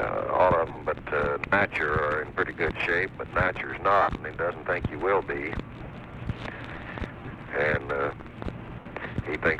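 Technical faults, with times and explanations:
0.69–0.77 s, 4.02–4.08 s, 7.19–7.35 s and 8.79–8.86 s, lost LE Audio frames: the Bluetooth link dropped audio, and the LC3 decoder concealed each gap by repeating the last good spectrum with scrambled phase signs. Tones smear into brief noisy hiss. The first and third spots are broken-up scatters of short gaps (45 ms within 75 ms, and 90 ms within 150 ms, the longest runs around 15–20 ms). The second and fourth are solid 60 ms gaps.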